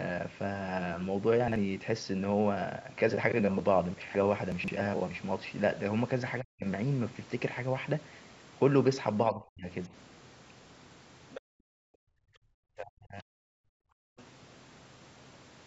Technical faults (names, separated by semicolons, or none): chunks out of order; speech suppressed in double talk; other side's voice leaking through; background gated by the echo canceller